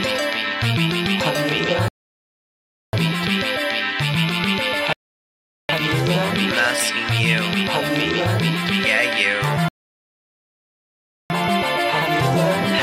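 The music drops to silence at 1.88–2.93 s, 4.93–5.69 s and 9.68–11.30 s, then resumes exactly where it stopped. These are rebuffering stalls: playback runs dry and waits for data, adding about 1.05, 0.76 and 1.62 s without losing anything.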